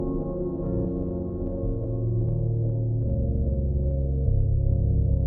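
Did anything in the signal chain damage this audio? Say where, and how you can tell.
No, I can't hear any damage from any stage of the chain on this recording of everyday sounds.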